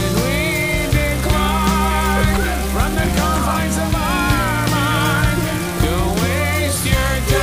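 No technical faults can be heard anywhere in the recording, and the signal holds steady throughout.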